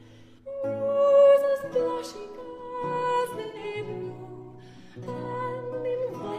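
At 3.42 s there is AAC frame loss with concealment: 128 ms of data goes missing, which fits three lost frames, and the decoder rebuilds the gap from the last good spectrum. Until 3.58 s the sound smears into a noisy, phasey patch.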